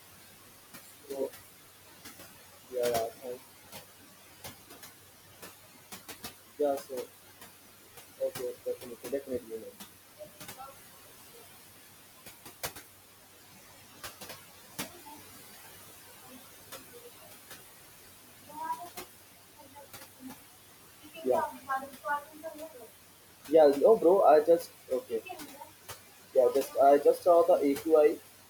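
Right from the start the sound is already on what is likely a switch to a distant microphone, as if the close mic's feed had dropped out and something further away, like a camera mic, was picking it up instead. Until 1.26 s it's roomy and hollow, thin in the bass, about 5 dB quieter, with the room noise sitting only around 25 dB below the speech. Then it snaps back to the close, fuller sound.

Noise suppressor artifacts run through the whole clip. The suppressor is pulling the steady background down by about 15 dB, judging it band by band and frame by frame, so the room noise dips in the gaps and comes back up under the speech. The room noise itself, about 17 dB under the speech, is just the room and isn't a fault.

There are four spots of speech cut by the noise suppressor, where it mistook bits of speech for noise and ducked them along with the background. The first is between 8.83 and 9.67 s, dropping as much as about 12 dB over roughly a third of a second in total. 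The next is between 21.5 and 22.05 s, also down by about 12 dB. Right after that, between 22.22 and 22.85 s, it drops by about 10 dB. The last is between 25.1 and 25.62 s, down by about 8 dB. In each case the affected speech comes out swallowed or faint.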